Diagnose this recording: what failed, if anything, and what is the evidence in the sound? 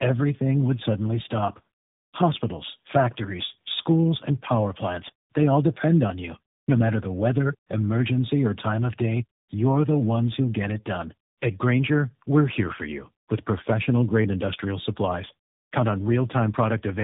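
What failed here is at the codec stage, and it's tandem speech coding running the whole way through the speech. Everything sits below about 3.8 kHz, and the sound is rough, muffled and warbly in a way no single narrowband coder gets to alone. That pattern points to three speech codecs in a row, likely G.726, then G.729A, then AMR-NB, with each one decoding and re-coding the previous coder's already damaged output, so the errors pile up.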